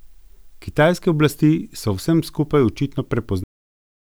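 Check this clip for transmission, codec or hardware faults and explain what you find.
One fault: a cut-off end. At 3.44 s, right after "v vsem skupaj očitno", the speech stops mid-sound into dead digital silence with no decay, because the final buffers were never written or played.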